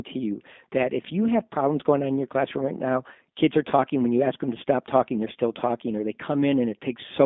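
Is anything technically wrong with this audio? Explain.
Yes. Throughout, the speech sounds thin, boxed-in and slightly rough and synthetic, confined to roughly 200 Hz to 3.6 kHz. That is the G.729 codec: each 10 ms frame is rebuilt from a vocal tract filter, a pitch predictor and a few pulses, which fits an 8 kbit/s rate, so the damage is plainly audible.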